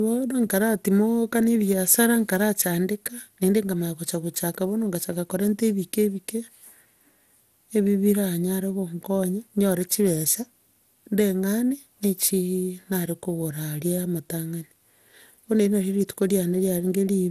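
Throughout the speech, the sound is swirly, smeared and hollow, attacks are blurred, and nothing remains above 15.8 kHz. The likely cause is generation loss: about seven MP2 passes near 96 kbit/s, each requantising on a shifted frame grid, compounding noise and spectral holes.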